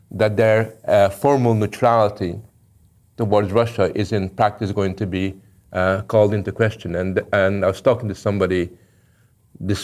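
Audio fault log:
Nothing to log here: this bit of speech comes through with no audible faults anywhere along the way.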